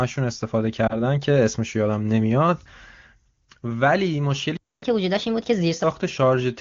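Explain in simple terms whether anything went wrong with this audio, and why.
Three things go wrong. Around 0.9 seconds there is a lost AMR speech frame: a single tiny chunk fails, and the phone briefly guesses, causing a short warble rather than silence. At 4.57 to 4.82 seconds, a playback stall cuts the sound to complete silence for about a quarter second, likely because the player ran out of data. From 4.82 to 5.84 seconds comes catch-up at higher speed: the sound plays 1.25 times faster and about four semitones higher, then settles back, which a plain pitch change wouldn't do.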